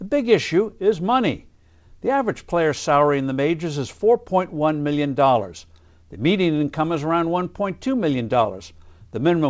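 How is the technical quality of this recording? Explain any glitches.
No glitches can be heard anywhere in the recording.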